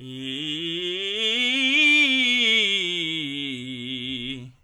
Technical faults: none

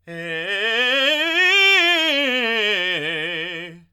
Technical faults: none

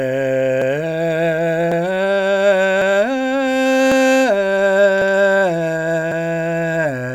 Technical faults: overlapping chunks

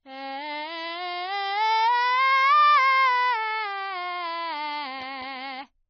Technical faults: AAC compression

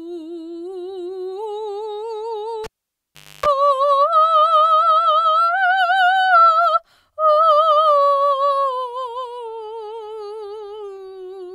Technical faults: cable pulled and plugged in

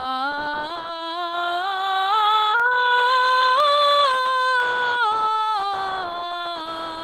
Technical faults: periodic USB or driver dropouts

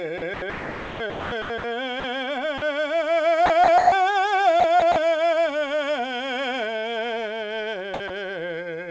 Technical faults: sound chopped by the voice detector; sound dropped by the voice detector

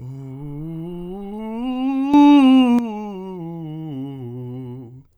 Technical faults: sudden gain jump

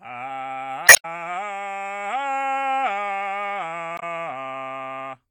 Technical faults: damaged data in a compressed stream

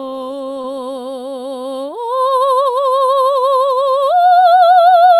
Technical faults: short concealed packet loss

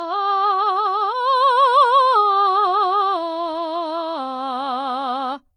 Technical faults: transcoding between lossy codecs

